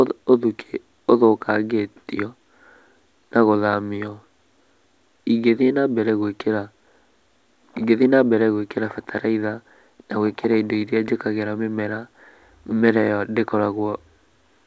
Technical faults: none

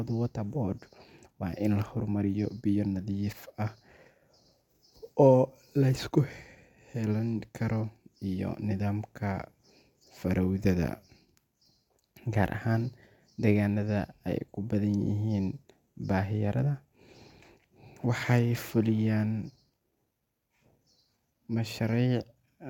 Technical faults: none

